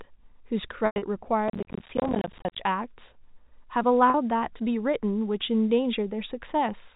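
From 0.86 to 1.02 s, packet loss with pitch repetition removes about 140 ms of speech. The receiver repeats the last pitch period, which is heard as a held buzz. During the longest 100 ms gap that buzz fades to silence. On a spectrogram this shows as frozen harmonic stripes thinning into a blank band.

Between 1.48 and 2.59 s, processor overload crackle appears. Around fifty of the small buffers, which fit a 10 ms size, miss their deadline. Each one leaves a hard-edged dropout to silence, and together they make a gritty tearing. The waveform shows many tiny notches, and the spectrogram shows broadband vertical clicks.

At 4.10 s the packet loss with pitch repetition returns as a 40 ms hold. That is too short to fade, so it sounds like a slightly stretched, buzzy note, seen as briefly repeated harmonics.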